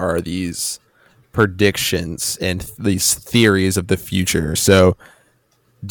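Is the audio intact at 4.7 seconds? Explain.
No. Hard clipping runs from 4.69 to 4.85 s, just after "of the future". The speech overdrives a stage by about 5 dB. Its peaks are cut flat, causing crackle on the peaks.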